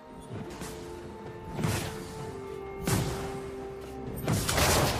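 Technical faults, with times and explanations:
No technical faults can be heard anywhere in the audio, and the signal stays steady and intact throughout.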